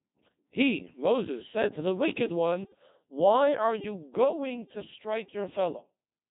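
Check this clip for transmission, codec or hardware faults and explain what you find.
Two faults are present: a very low-rate digital voice codec throughout, and a short burst of radio bit errors.

Throughout, the Codec 2 vocoder at 2.4 kbit/s resynthesises speech from pitch and envelope, so it sounds heavily buzzy and robotic, and spectrograms show smeared, over-regular harmonic stripes.

From 2.64 to 2.80 s, bit errors on digital voice radio at roughly 5 percent corrupt frame parameters, giving warbling bleeps. The spectrogram shows abrupt pitch and level jumps there.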